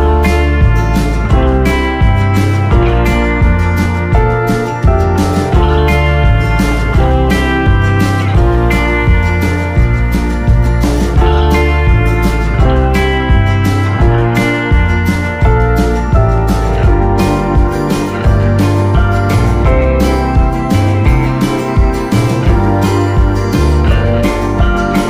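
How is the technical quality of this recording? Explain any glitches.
Nothing stood out on listening that would count as a technical glitch in this recording.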